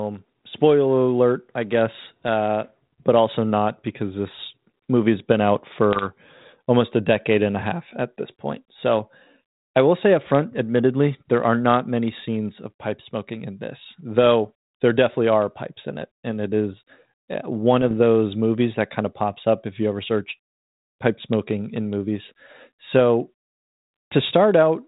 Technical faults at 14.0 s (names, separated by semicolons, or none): none